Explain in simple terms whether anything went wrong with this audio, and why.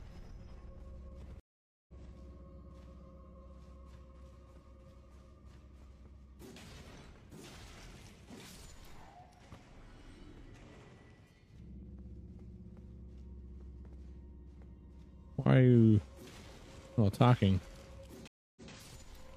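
Two stream reconnects interrupt the sound. The connection dropped, so playback went silent and restarted fresh. At 1.40 s it stops for about half a second and returns roughly a third of a second further on. At 18.28 s it stops for 0.29 s and returns 0.14 s earlier, briefly repeating.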